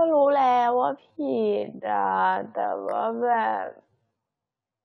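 At 0.97 s the speech suddenly slows, and it stays slow until the end. This is a time-stretched section. The pace drops to about 0.56 times normal speed, yet the pitch does not fall with it. That points to software that likely stretched the audio to fill a length, repeating short slices to keep the pitch steady. The slowed speech drags.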